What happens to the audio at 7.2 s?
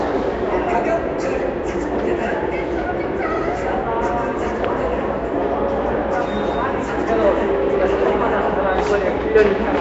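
At 7.2 s the audio carries the same damage it has from start to finish: a coarse, gritty texture with a hissy halo around the sound and a smeared, underwater quality. There is no content above 7.7 kHz. This is most likely Nellymoser compression, the old Flash microphone codec, at a rate that fits about 32 kbps. Its fixed, sparse bit budget starves weaker bands, which get filled with noise instead of real detail.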